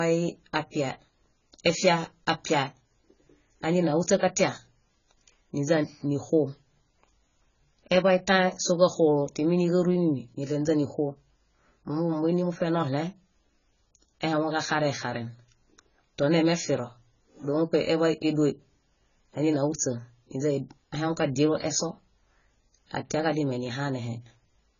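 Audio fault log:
Throughout, AAC compression: the speech has nothing above 7 kHz and sounds heavily degraded, dull and smeared, with a warbling, fizzy texture on sibilants and held sounds. This is likely low-bitrate AAC-LC coding, which fits a rate around 16 kbps. At that rate the encoder drops the cut-off and spends too few bits on each frame's spectrum, leaving gaps or noise-filled bands that shift from frame to frame.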